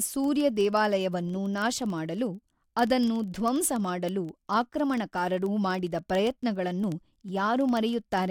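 Word clock ticks run through the speech from 0.12 s to 8.30 s: sharp, uneven clicks at a steady rate of roughly one every 40 ms, around two hundred in all. The receiving device is running on its own clock instead of locking to the sender's, and the two differ by something like 500 ppm. Each time they slip past each other, a single sample is dropped or repeated and a tick lands in the audio.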